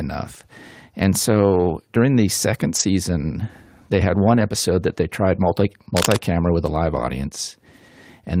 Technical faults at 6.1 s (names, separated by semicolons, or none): cable scratch noise